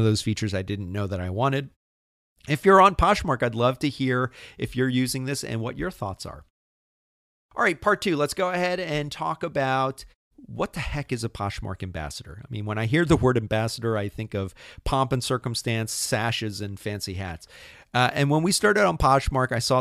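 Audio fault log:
No faults were heard in the speech. In the pauses the output fades to silence and comes back in time for the next sound, with no speech lost.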